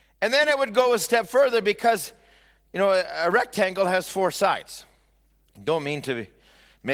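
Mains hum runs through the whole speech clip, from the first second to the last, as a steady low tone at 50 Hz sitting roughly 35 dB below the speech. A ground loop or a transformer close to the signal path has let the power line leak in. The result is a constant drone under the voice that never changes with what is said. It persists between phrases, where the light artefacts of the Opus voice compression add nothing to hide it.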